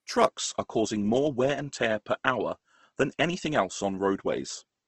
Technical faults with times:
0.00-4.87 Opus compression

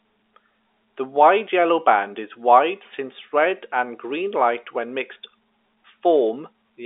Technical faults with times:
none

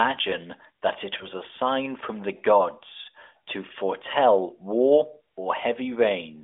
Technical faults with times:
1.18-1.27 lost AMR speech frames

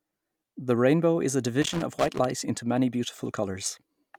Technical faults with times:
1.62-2.25 loose connector crackle

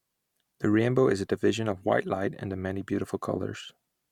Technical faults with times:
none

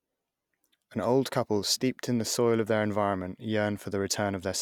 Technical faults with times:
3.77 block of digital silence

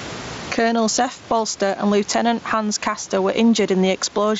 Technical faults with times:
0.00-4.39 gain pumping

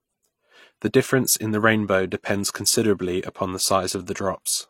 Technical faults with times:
0.00-4.70 transcoding between lossy codecs

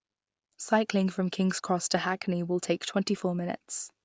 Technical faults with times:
none

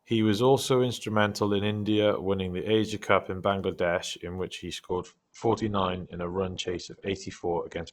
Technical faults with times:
4.88-7.93 adaptive stream at a lower bitrate

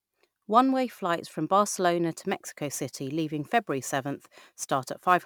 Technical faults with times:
2.18-5.25 sample clock jitter

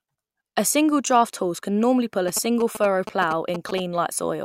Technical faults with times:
2.28-3.80 GSM signalling bursts

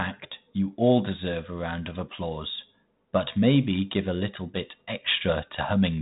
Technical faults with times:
none

